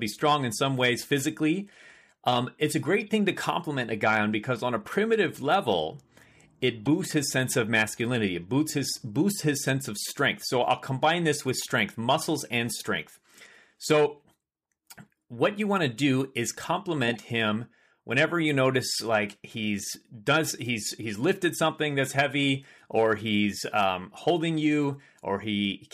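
Corrupt frames were decoded three times: bit errors misplaced energy in frequency, giving short blips at 3.00–3.02 s, 6.86 s and 17.08–17.17 s, each spanning roughly two frames.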